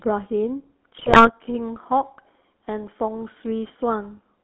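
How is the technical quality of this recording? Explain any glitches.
The technical quality is poor: the whole recording carries plainly audible codec coloration, and a short burst of corruption breaks up the speech early on.

From start to finish the speech sounds buzzy and gravelly, with a thin, boxy tone confined to roughly 250 Hz to 3.5 kHz. This is the GSM full-rate codec, which fits a 13 kbps GSM full-rate stream. It rebuilds the voice from a vocal-tract filter fed by a sparse, regular pulse excitation, so the fine texture of the voice is lost. Nothing above 4 kHz gets through.

From 0.98 to 1.3 s the speech breaks into squawks, pops and gargling. These are GSM bit errors: corrupted bits reach the decoder and scramble the filter, pitch and gain values it uses to rebuild each frame, which bends the spectrum and makes the level jump. The roughly 0.3 s span fits about nine damaged frames on a link with a bit error rate of a few percent.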